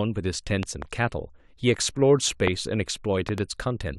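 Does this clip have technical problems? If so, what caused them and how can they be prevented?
Yes. Loud pops jump out over the speech, which carries on beneath them: two between 0.63 and 0.84 s, one at 2.48 to 2.50 s, and two between 3.29 and 3.40 s, reaching about 10, 20 and 15 dB above the speech respectively. They are likely voltage spikes from a plug, switch, static or driver glitch. Seat connectors firmly and avoid switching equipment while recording.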